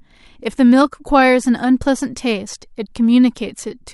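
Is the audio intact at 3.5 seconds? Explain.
Yes, the speech at 3.5 seconds is intact, with no dropout, click, distortion or other fault audible at that moment.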